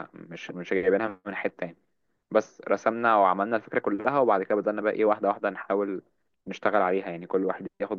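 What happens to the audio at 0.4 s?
Nothing goes wrong at 0.4 s; the speech runs on intact through that moment with no dropout, click or distortion.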